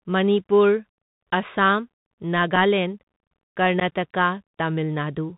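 Throughout, the speech carries the Bluetooth CVSD headset codec. Nothing above 4 kHz survives, sibilants turn scratchy, and a granular hiss sits underneath, which fits a 64 kbps link.

At 2.56 s and again from 3.80 to 3.82 s there is unconcealed Bluetooth headset packet loss. About one packet, then a few, go missing, leaving abrupt holes of 3.8 and 11.2 ms, with the speech briefly quieter afterwards.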